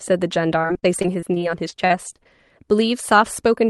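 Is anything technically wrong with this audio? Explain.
Yes. From 0.61 to 2.27 s the speech turns choppy and robotic, with small pieces dropping out. This is repeated packet loss: fourteen gaps, the longest 38 ms, each patched by extending the previous sound, so about 18% of that stretch is filled-in audio.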